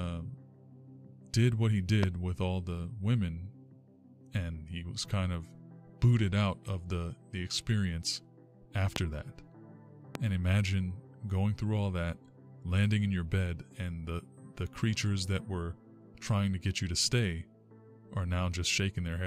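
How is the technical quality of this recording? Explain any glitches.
The recording has three loud pops. At 2.03 to 2.06 s, 8.96 to 8.99 s and 10.15 to 10.18 s, a sharp, brief thump jumps roughly 20 dB above the sound (nearer 15 dB for the last), which continues underneath. Each is likely a voltage spike from a plug, switch or static discharge, shaped into a pulse by the following circuitry.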